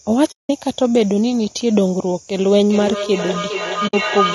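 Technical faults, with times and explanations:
Throughout: low-delay AAC compression. The sound is rough and grainy, with noise filling the gaps between pitch harmonics and a thin, synthetic-sounding top band. This points to a low-delay codec like AAC-ELD at a low rate, about 32 kbps, most likely. Its short frames cannot separate harmonics well. On a spectrogram the harmonic stripes look smeared and speckled, and the upper band appears blocky or patched rather than naturally detailed.
0.31–0.50 s and 3.87–3.94 s: AAC frame loss with muting. The speech drops into two soft-edged silences, about 180 ms and then 60 ms long. The lengths fit runs of nine and three lost frames of roughly 20 ms each, which the decoder replaced with zeroed spectrum. Because the overlapping windows taper the sound out and back in, the edges fade rather than cut. On the waveform these are short gaps with sloped edges. 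On a spectrogram they are clean vertical blank bands across all frequencies.
2.6–4.34 s: feedback howl. From 2.6 s a tone around 1 kHz rises instead of dying away, fed by a microphone-to-loudspeaker loop with a round-trip delay of roughly 0.4 s. It reaches about 6 dB below the speech and continues to the end of the clip, with nothing breaking the loop. On a spectrogram it forms a bright, narrow horizontal line near 1 kHz that brightens over time. On the waveform it shows as a swelling envelope.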